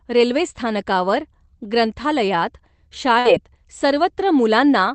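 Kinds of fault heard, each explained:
Burst of packet loss: near 3.19 s a run of packets drops, the last sound is stretched and faded for about 50 ms, then speech jumps ahead past a 60 ms hole.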